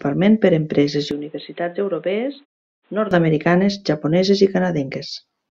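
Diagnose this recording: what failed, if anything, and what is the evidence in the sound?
At the capture stage the input was likely switched to a poorer device from 1.11 s, just after "per empreses", to 3.11 s. The sound turns dull, with nothing above 4.1 kHz, drops about 10 dB with a new background noise well below it, and switches without a gap. A codec band limit would not shift the level and noise floor like this.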